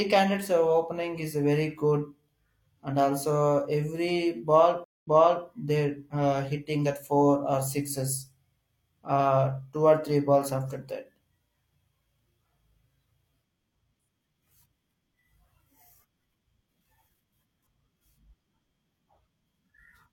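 A stream reconnect occurs at 4.84 to 5.46 s. The speech cuts out for 0.19 s while the player loses its connection, reconnects and starts a fresh decoder mid-stream. Because the server resends a burst of buffered data, playback resumes about 0.43 s earlier than where it dropped, so a short stretch of speech is heard twice. The first frame after the restart fades in, which softens the re-entry.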